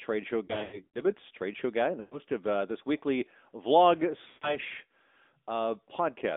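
Throughout, the speech carries the AMR narrowband mobile codec: the band runs only from about 250 Hz to 3.6 kHz, and there is a plainly audible buzzy, synthetic edge that fits a mid-rate AMR-NB mode around 10 kbps. A spectrogram shows a hard ceiling below 4 kHz with nothing above it.

Lost AMR speech frames occur from 0.46 to 1.13 s (about 240 ms missing, scattered, longest gap 80 ms), 2.00 to 2.19 s (120 ms), and 4.28 to 4.58 s (140 ms). The decoder repeated stale settings at falling gain, which sounds like smeared, warbling dropouts that fade and return rough. These show as sagging envelopes and blurred, repeated harmonics.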